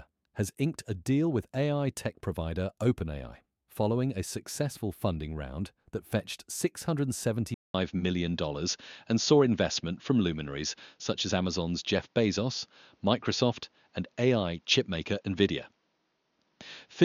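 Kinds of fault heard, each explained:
Input switched to a poorer device: at 7.54 s a 200 ms waveform gap, then likely another microphone, spectrogram empty above 6.9 kHz, new noise floor, level shifted about 5 dB.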